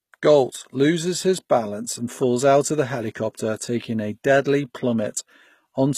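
A speech recording, likely passed through HE-AAC compression at a low rate consistent with about 20 kbps, so its treble is rebuilt rather than coded: sibilants sound gritty and lispy throughout, with nothing above 14.9 kHz.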